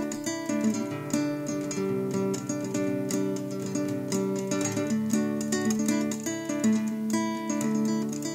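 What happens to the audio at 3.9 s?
Nothing goes wrong at 3.9 s: the sound carries on intact through that moment, with no dropout, click, glitch or other fault to be heard.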